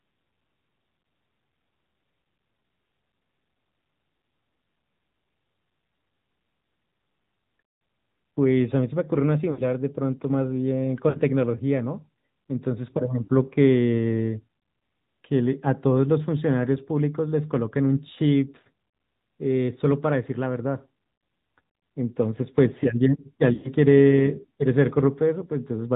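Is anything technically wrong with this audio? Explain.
Yes. The speech runs through the AMR narrowband mobile codec for its whole length, and there are four bursts of lost AMR speech frames.

The codec damage is plainly audible. Nothing above 4 kHz survives, and the voice has a buzzy, synthetic edge. The audio was squeezed to about 10.2 kbps by modelling the vocal tract and exciting it with a few pulses per 5 ms subframe. That buzz separates it from a simple low-pass filter, which would dull the sound without making it artificial.

The lost AMR speech frames fall at 9.52–9.62 s, 11.10–11.21 s, 13.24–13.30 s and 23.54–23.70 s. Each time, the decoder kept repeating the last good pitch and vocal-tract settings while lowering the gain. Instead of a hard silent gap, the sound smears and warbles, then recovers roughish. The longest burst, at 23.54 s, lasts about 0.1 s, which fits roughly five 20 ms frames, so it fades further than the shorter ones.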